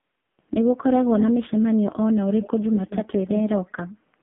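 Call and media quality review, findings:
AMR narrowband mobile codec, throughout. Band limited to about 150 Hz to 3.5 kHz, nothing above. Heavy buzzy, synthetic coloration, which fits a very low mode near 5 kbps.

Echo leak, 2.41 to 2.49 s and 2.67 to 3.04 s. Delayed copy trailing by 146 ms, roughly 10 dB under the speech. Likely far-end echo canceller passing loudspeaker pickup back.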